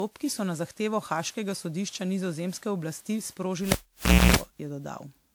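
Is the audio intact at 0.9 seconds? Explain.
No. At 0.9 s the speech carries generation loss, which runs through the whole clip. It has likely been lossy-encoded around fifteen times, each pass requantising on a shifted frame grid so the noise and spectral gaps pile up. The result is swirly, hollow and smeared, with softened consonant attacks. Unlike a single low-bitrate encode, the band still extends to 20.1 kHz, consistent with a fairly generous rate such as 128 kbit/s. The damage comes from repetition, not a narrow bandwidth.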